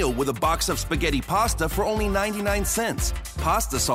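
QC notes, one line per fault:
No fault to log in these QC notes.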